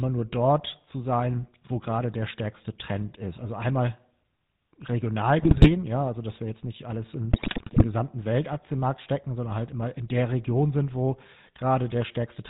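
It's a speech clip with GSM full-rate codec character the whole way, that buzzy, gravelly roughness with nothing above 4 kHz, consistent with 13 kbps full-rate GSM. There are also two bursts of GSM bit errors, from 5.38 to 5.74 s just before "ja also dass wir" and from 7.32 to 7.85 s right after "jetzt nicht alles in". Corrupted frames reach the decoder there, so the sound squawks, pops and gargles.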